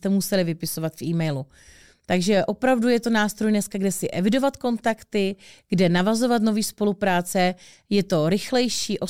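Nothing in the recording stood out as a technical problem when I listened through it.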